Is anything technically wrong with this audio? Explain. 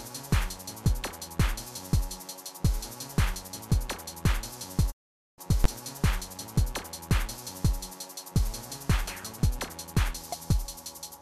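Yes, there are two faults, close together.

From 4.90 to 5.40 s there is a digital broadcast dropout. The receiver stopped getting usable frames, either because the signal was lost or because frames failed their checksum, so it muted until clean frames arrived again. The sound fades out over about 20 ms, stays silent for roughly 456 ms, then resumes further along, and whatever was sent during the gap is gone. The short fade and the jump forward on return set it apart from a tape edit or a buffer underrun, which would click hard or pick up where it left off.

At 5.64 s there is a brief burst of invalid numbers at full scale. A calculation produced infinite or invalid values, which were forced to the maximum sample value for one processing block. The block lasts about 12 ms, which fits a 512-sample block, and because it is so short it is heard as a single loud bang rather than two pops with silence between them. 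Unlike a clipped peak or a discontinuity click, it stays flat at one extreme value, far beyond the audio's peaks, across the whole block, regardless of what the surrounding sound is doing.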